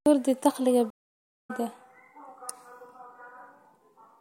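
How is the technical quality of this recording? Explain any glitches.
A stream reconnect breaks the speech from 0.90 to 1.51 s. The audio cuts out for 509 ms, and when it returns, the speech has jumped ahead by roughly 0.4 s, so a stretch of talk is simply missing. That combination points to a dropped connection: the player fell silent, reconnected, and started a fresh decoder partway into the live stream, picking up from wherever the stream had reached rather than where it left off.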